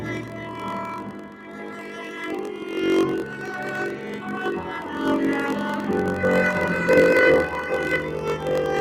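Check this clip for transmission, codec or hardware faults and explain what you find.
Three related faults are present: a speech-oriented noise suppressor working on non-speech sound, and a block-size mismatch that pads the audio with gaps.

Noise suppressor applied to music or sounds: Throughout, the suppressor treats sustained tones and tails as noise, swinging the level by roughly 10 dB. Attacks survive, which distinguishes this from ordinary compression pumping.

Block size mismatch (padded): Throughout, short blocks are zero-filled to match a 1024-sample read size. This causes a 46.9 Hz buzz and playback at 0.938× speed. The pitch stays roughly unchanged, so this is not resampling.

Sound cut by the noise suppressor: From 0.22 to 0.62 s and from 0.98 to 2.18 s, steady sound sinks by about 5 dB and about 6 dB respectively. This is level loss, not dropout silence.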